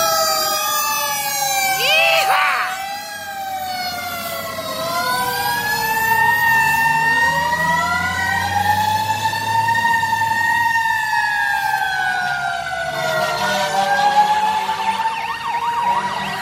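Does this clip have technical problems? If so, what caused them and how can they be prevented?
No, there are no technical problems to hear in this clip. With nothing going wrong, there is nothing here that needs preventing.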